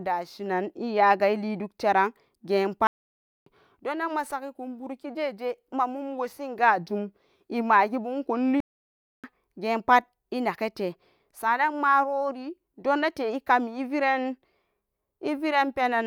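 At 2.87 s the speech cuts to silence for about 0.59 s, and again at 8.60 s for about 0.63 s: playback stalls, likely from the player running dry of data. Each shows as a flat-line gap in the waveform and a blank column across the spectrogram.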